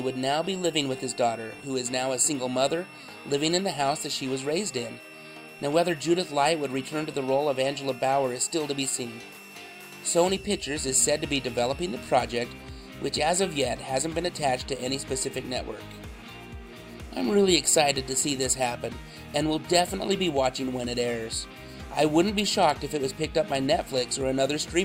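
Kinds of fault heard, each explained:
Switching supply whistle: A switching power supply is dropping into an audible burst mode, or beating against another supply. Its ripple leaks into the audio path. Here it is a thin, high whistle, sitting roughly 20 dB below the sound. Its pitch wanders between about 2.69 and 2.74 kHz as the load shifts. It is present from the start and stops at about 12.2 s.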